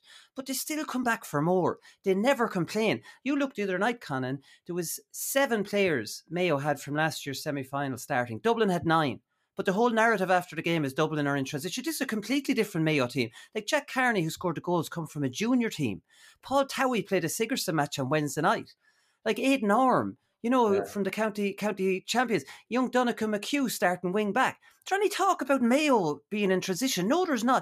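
Nothing here gives me any trouble: it's just speech going along with no dropouts, glitches or other faults to point to at any moment.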